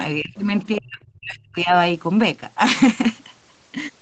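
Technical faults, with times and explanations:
0.19–0.37 s and 0.79–1.73 s: speech suppressed in double talk. The speech dips by about 20 dB for roughly 0.2 s, then by up to about 35 dB, over roughly 0.7 s. The likely cause is the echo canceller attenuating the near talker along with the echo while both sides were active.
0.38–0.43 s and 0.77–0.81 s: other side's voice leaking through. Short scraps of a second voice sit under the speech, about 35 dB below it first and about 20 dB below it second. These are likely loudspeaker echo the canceller did not fully remove from the microphone signal.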